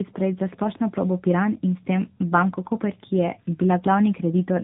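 Tandem speech coding is audible from start to finish: the speech passed through two low-rate speech coders in a row, the second re-encoding the first's artefacts. It sounds rough, muffled and warbly, with nothing above 3.8 kHz, which fits an AMR-NB chain.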